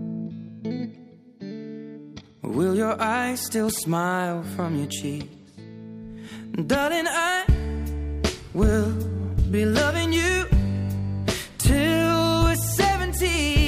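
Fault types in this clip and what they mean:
Nothing in this one stands out as a technical problem, so there's nothing to list here.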